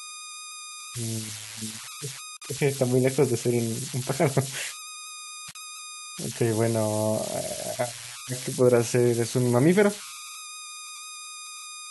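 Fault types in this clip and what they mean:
Converter idle tones: An undithered delta-sigma converter, fed very low-level input, settles into repeating bit patterns that produce a whistle around 1.5 kHz in the pauses between speech and a grainy texture under quiet passages, sitting about 12 dB below the signal. Unlike mains hum, its pitch is not tied to 50 or 60 Hz and tracks the input's offset, and unlike plain hiss it has a definite tonal pitch.
Gap at a join of encoded pieces: Separately encoded segments were spliced without trimming each run's start-up delay and end padding, so brief silences open in the middle of continuous speech, about 49 ms at 2.37 s and about 41 ms at 5.51 s. What sets this apart from a dropout or packet loss is that no audio is missing: the speech resumes exactly where it stopped, and the edges of the silence are smeared by the codec rather than clicking sharply.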